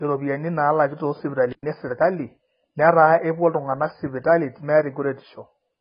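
AAC compression, throughout: the speech sounds dull and smeared, with warbling fizz and nothing above 5 kHz, likely from AAC-LC near 16 kbps.

Intermittent contact, 1.51 to 1.64 s: a loose connection opens for 0.11 s, dropping the speech to faint hiss, with crackle at both edges.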